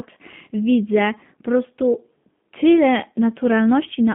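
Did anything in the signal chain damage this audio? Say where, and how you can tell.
Yes, at the codec stage, throughout: this speech has G.729 codec damage. It sits in a 150 Hz to 3.5 kHz band, with a rough, synthetic buzz, consistent with 8 kbit/s pulse-excited resynthesis. A plain telephone band-limit would narrow the sound without adding that buzz.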